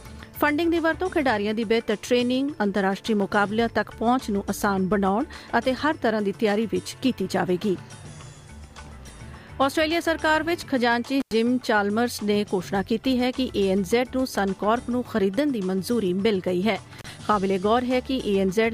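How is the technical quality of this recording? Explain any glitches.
The recording has two brief dropouts from an intermittent contact, at 11.20 to 11.33 s and at 16.99 to 17.04 s. A loose plug or cable connection momentarily breaks the signal path, so the sound cuts out for about 95 ms and then about 33 ms, with crackle as the contact opens and recloses and faint hiss in between. On a waveform each appears as a sudden collapse to near-silence bracketed by sharp spikes. A spectrogram shows matching vertical broadband streaks around a narrow gap.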